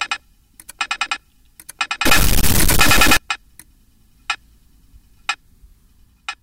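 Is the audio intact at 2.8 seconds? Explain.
No. From 2.05 to 3.17 s a stuck bit, likely one data line frozen, offsets about half the samples by a large step near -10 dBFS, producing harsh buzz; waveforms show jagged jumps, spectrograms broadband smear.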